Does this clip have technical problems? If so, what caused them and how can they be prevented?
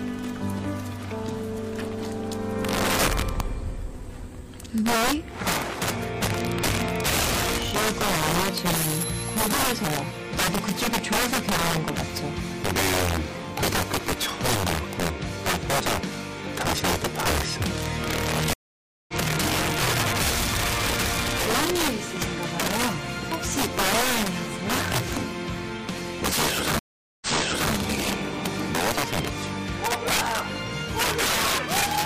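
Yes. An integer overflow runs through the whole clip. A gain stage drove the signal about 5 dB past the top of the integer range, and rather than being limited, every sample beyond that ceiling wrapped around to the opposite extreme. Only a few percent of samples exceed the limit, but each one jumps across the full scale, so the loudest moments erupt into harsh, violent cracks far sharper than ordinary clipping. Using saturating arithmetic or a limiter before integer conversion would prevent it.

There are two stream reconnects. At 18.53 s the connection dropped, the player went silent for 0.55 s, then reconnected and started a fresh decoder. The audio resumed about half a second further on, skipping that material, and the first frame fades in. At 26.79 s a second break left 0.42 s of silence. This time the server resent a burst, so playback resumed 0.51 s earlier and repeated material already heard, with recovery ending by 27.73 s. 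Larger client buffering and resuming from the exact byte or timestamp offset would prevent these jumps.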